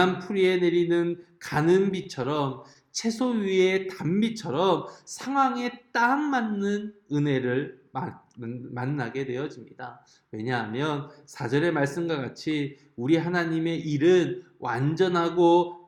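Between 1.01 and 2.90 s there are scattered short gaps: around ten brief holes, none longer than about 15 ms, which points to isolated packets lost or arriving too late. The receiver concealed each one by extending the preceding sound, patching roughly 100 ms in total, or about 5% of that stretch. The audio stays clear but picks up small ticks and momentary smears where each patch sits.

From 3.06 to 3.98 s a jitter buffer slow-down occurs. With its reserve running low, the receiver stretched the audio by repeating single pitch periods and short slices of quieter material, adding 60 ms over under a second. Playback runs at 94% speed with pitch unchanged, so sounds are drawn out and the section feels slightly sluggish.

Between 5.98 and 6.57 s comes a jitter buffer speed-up. The buffer held more audio than its target, so the receiver cut out short pieces one or a few pitch periods long, about 50 ms altogether. 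Playback runs at 108% speed while the pitch stays the same, giving a brief hurried, compressed quality before normal pacing resumes.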